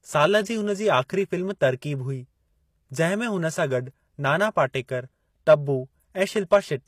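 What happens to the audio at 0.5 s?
At 0.5 s the speech carries HE-AAC compression damage, present throughout the clip. The treble is likely rebuilt by spectral band replication from copied lower bands, which fits a low bitrate around 24 kbps. S sounds come out gritty and metallic, with nothing above 14.9 kHz.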